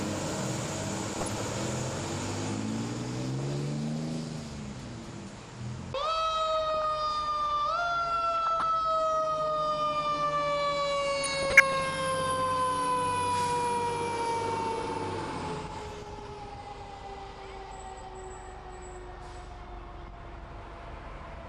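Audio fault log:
throughout MP2 compression: The top end is dull and the sound carries a gurgling, granular texture, with upper detail flickering in and out. This is likely MP2 encoding at a low rate, which fits roughly 80 kbps. The coder divides the signal into 32 sub-bands and, short of bits, switches off the highest bands and quantises the rest coarsely, so bands come and go from frame to frame.
1.13–1.45 s, 6.70–6.85 s, 8.43–8.63 s, 11.23–11.86 s, 15.79–15.96 s DAB burbling: Short bursts of noise blips in single sub-bands sit over the sound, the longest at 11.23–11.86 s. Bit errors at a few tenths of a percent slip past error correction into the MP2 data and corrupt samples and scale factors. Single sub-bands then jump in level for up to a frame. Each burst points to somewhere between about 8 and 29 damaged frames.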